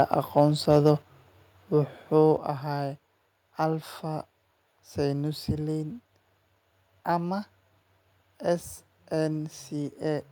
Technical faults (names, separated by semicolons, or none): microphone overload; microphone volume stepped down